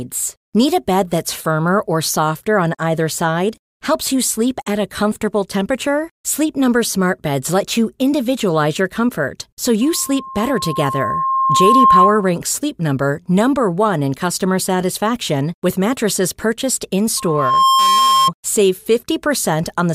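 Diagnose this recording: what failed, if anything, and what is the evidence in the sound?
Loudspeaker feedback squeal in the acoustic loop between microphone and loudspeaker. The loop gain passed unity at 1.1 kHz. After "individualize your comfort so", a tone grows over about two seconds (9.81–12.33 s). After "satisfaction with mattresses purchased", it builds within half a second (17.17–18.31 s). On a spectrogram it is a brightening horizontal line at 1.1 kHz; on the waveform, a swelling envelope.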